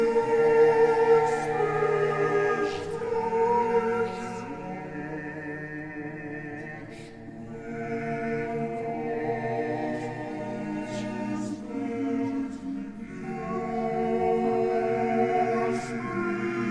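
Wrong sample rate, throughout the whole clip: everything plays at about 0.69 times its proper speed and sits roughly 6.5 semitones low, so the sound is dragged out and dark from start to finish. Because speed and pitch drop together by the same ratio, the samples are being clocked out slower than they were captured, with no conversion in between. The ratio fits material recorded at 32 kHz being played back at 22 kHz.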